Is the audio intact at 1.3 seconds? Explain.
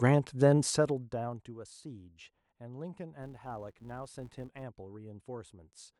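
No, zipper noise runs from 0.62 to 1.54 s: the speech drops about 20 dB in unsmoothed steps, roughly fifty a second, producing ticking rather than a smooth fade.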